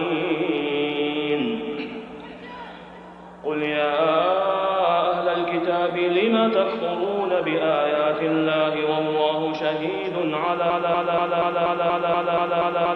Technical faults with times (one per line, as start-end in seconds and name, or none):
10.70-12.96 broken-record loop